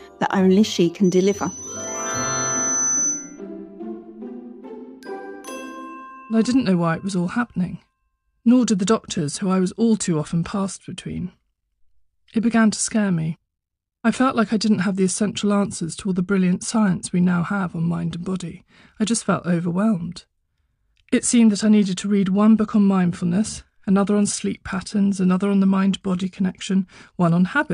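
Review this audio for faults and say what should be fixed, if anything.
From 1.04 s to 3.41 s a thin, piercing whistle at 6 kHz swells up over about two seconds until it sits roughly as loud as the rest of the sound, then stops. This is loudspeaker feedback squeal: a microphone picked up the loudspeaker it was driving, and at 6 kHz the loop gain rose above one, so that frequency fed on itself and kept growing. To prevent it, lower the monitor gain, move the microphone away from the speaker's coverage, or notch 6 kHz.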